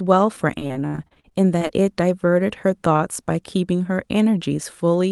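From 0.59 to 1.71 s the speech suffers repeated packet loss, heard as robotic sound. Over this stretch of just over a second, a dozen or so short dropouts follow one another, the longest about 67 ms. Each hole is papered over by extending the preceding sound, so roughly a quarter of the span is synthetic fill and some 300 ms of speech is simply gone. The result is choppy, with pieces missing. The high end, limited to about 12 kHz, points to an Opus call path.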